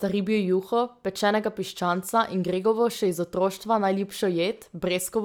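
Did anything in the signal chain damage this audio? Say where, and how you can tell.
No, nothing in the signal chain audibly damaged this speech recording. No stage from capture to playback leaves a mark that points to a problem.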